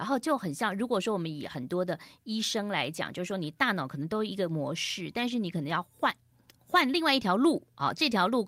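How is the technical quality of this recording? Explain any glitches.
Nothing to flag here: the speech comes through without any technical trouble I can pick out.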